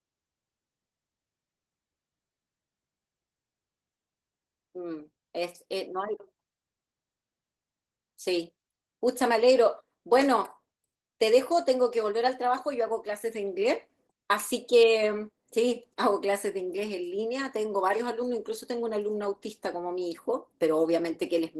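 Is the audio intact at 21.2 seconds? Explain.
No. At 21.2 seconds, as throughout the clip, the speech carries Opus voice compression damage: a linear-prediction coder handles the lower band, a transform layer covers the top, and coarse excitation coding, consistent with roughly 16 kbps, leaves the voice hoarse, slightly robotic and plainly degraded.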